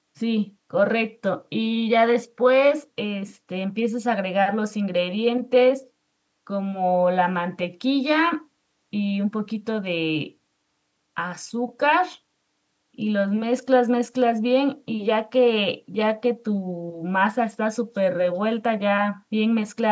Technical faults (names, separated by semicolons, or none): none